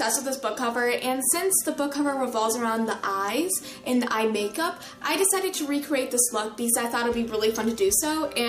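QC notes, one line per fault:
No faults found in this clip. Nothing in the audio calls for a QC entry.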